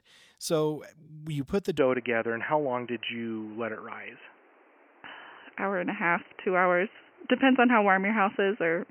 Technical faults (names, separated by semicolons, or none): input switched to a poorer device